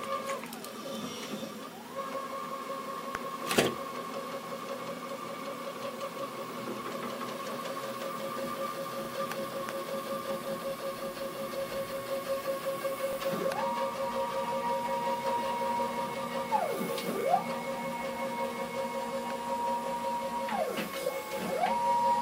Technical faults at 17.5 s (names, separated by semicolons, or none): none